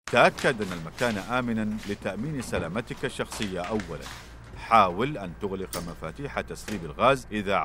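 No technical faults can be heard at any point in the audio, and the signal stays steady and continuous throughout.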